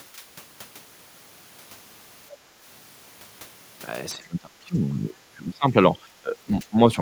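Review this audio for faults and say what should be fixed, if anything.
Speech suppressed in double talk at 4.15–5.76 s and 6.22–6.77 s: speech dips, up to about 25 dB, likely from echo-canceller ducking during far-end talk. Tuning the echo canceller's double-talk detection so near-end speech passes while the far end is active would prevent this.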